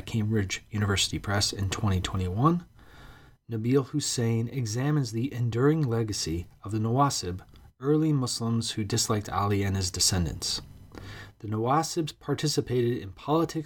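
No technical faults are audible.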